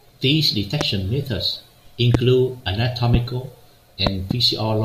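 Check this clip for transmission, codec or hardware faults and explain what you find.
Loud pops appear four times in the speech: single pops at 0.81 s, 2.14 s and 3.14 s, and a pair between 4.07 s and 4.33 s. Each is a sharp transient around 20 dB above the speech (the one at 2.14 s is nearer 15 dB), with the speech continuing underneath. The likely cause is a sudden voltage step from a connector, switch, static discharge or driver glitch, briefly shaped by the downstream circuitry.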